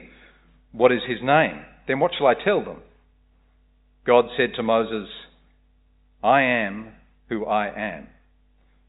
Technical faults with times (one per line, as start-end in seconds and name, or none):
none